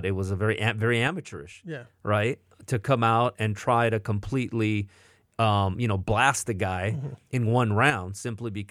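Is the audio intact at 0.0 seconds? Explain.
Yes, at 0.0 seconds the audio is intact, with no dropout, click, distortion or other fault audible at that moment.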